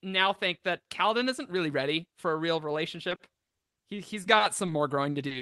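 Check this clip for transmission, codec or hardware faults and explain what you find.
There is one transmission fault. From 3.09 s to the end at 5.42 s, repeated packet loss (robotic sound) sets in. About a dozen short holes, none longer than 40 ms and covering roughly 13% of that stretch, are each patched by stretching the preceding sound. This gives a choppy stutter. A single dropout would be one isolated gap, but here the holes recur close together, so the repeated concealment is what sounds robotic. The call path tops out near 12 kHz, which fits a super-wideband Opus call.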